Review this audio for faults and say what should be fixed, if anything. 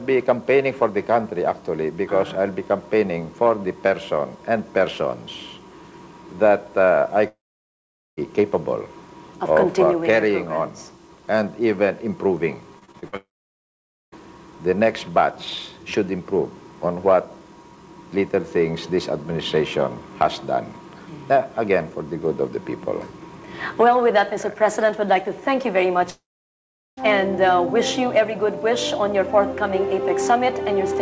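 Long network dropouts occur at 7.28–8.19 s, 13.16–14.14 s and 26.10–26.99 s. Each time the last sound is stretched into a brief fading buzz, then goes silent for about 0.8 s. Roughly 0.9 s of audio is lost per event, likely from a network outage.

Repeated packet loss (robotic sound) runs from 12.79 to 13.14 s, just before the second dropout. Five short gaps, the longest 43 ms, are patched by extending the preceding sound, so about 38% of that stretch is concealed, giving a choppy texture.

The call codec's band limit at 8 kHz applies throughout. To prevent these faults, stabilise the network link by using a wired connection or prioritising this traffic, and enable forward error correction with a deeper jitter buffer.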